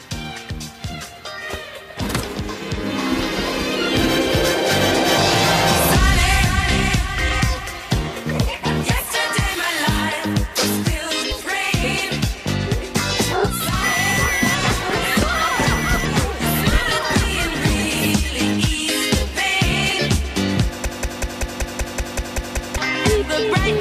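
The audio has three separate faults. At 11.3 s there are compressed frames skipped: the playback jumps ahead by roughly a tenth of a second, which fits about five whole codec frames lost from the file or rejected as damaged by the decoder. The material in that gap is simply missing. From 13.60 s to 18.12 s a doubled audio track is audible: a second, full-band copy of the same sound runs about one and a half seconds behind the original, at about 5 dB lower level. It carries no reverberant tail or room colouring, and it appears and disappears abruptly at those two points. The likely cause is the signal being captured twice, once through a slower path, or an edit leaving two misaligned copies in place. Between 20.85 s and 22.78 s there is a broken-record loop: a 190.58 ms fragment repeats exactly, back to back, 10 times, so the audio that belonged in those nearly two seconds never plays. This most likely comes from the player, encoder or stream stalling and repeatedly outputting the last buffered fragment until it recovers.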